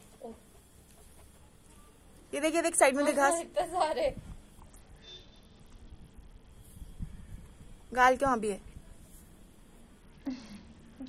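From 4.60 to 6.51 s, and again from 10.02 s to the end, a Bluetooth SBC bit pool drop dulls the treble and adds a gritty noise. The link cut the encoder's bit allowance, which points to a fall from a bit pool near 28 to about 7, roughly 66 kbps. The top sub-bands are left empty and the rest are coarsely quantised. A spectrogram shows the high band abruptly blanked, with speckled noise filling the lower bands.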